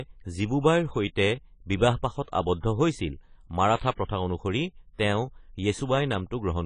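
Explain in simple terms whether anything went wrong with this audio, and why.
A couple of things went wrong here. The whole recording sounds dull and a bit smeared, with nothing above 10 kHz and a plainly audible warbly, fizzy edge on hissy sounds. That's the signature of heavy AAC compression, likely squeezed down hard to save space, so the encoder threw away detail.

There's also a pre-echo just after "হৈছিল মাৰাঠা", from 4.05 to 4.09 s. A short hiss creeps in about 43 ms before a sharp attack, softening it, because the codec spread its noise across a whole block, including the quiet moment before the attack.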